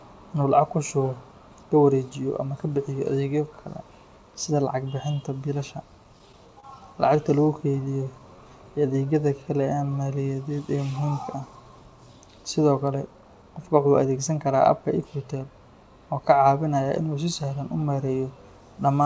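Just after "bixinta biilasha", from 6.04 to 6.65 s, the speech shows repeated stalls (stutter): packets arrived late, the jitter buffer ran dry five times, and the receiver stretched the last sound to bridge gaps of up to 27 ms. The same happens from 7.01 to 7.88 s across seven shorter gaps of up to 14 ms. Nothing is lost, but delivery catches and drags.

From 7.97 to 11.06 s a jitter buffer slow-down follows as the receiver rebuilds its reserve by repeating pitch periods, adding 250 ms. The speech plays at 92% speed with unchanged pitch, so sounds are drawn out and slightly sluggish.

From 13.06 to 15.36 s comes a jitter buffer speed-up. With too much audio queued, the receiver trims short pitch-period slices, cutting about a fifth of a second. Speech runs at 110% speed at the same pitch and sounds hurried. Throughout, the call path's wideband codec leaves nothing above 8 kHz.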